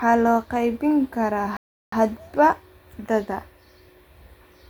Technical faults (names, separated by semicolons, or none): playback stall